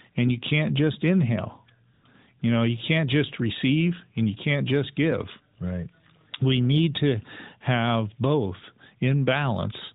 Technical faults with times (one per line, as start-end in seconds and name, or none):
1.94-2.04 AMR comfort noise
2.40-2.42 AMR comfort noise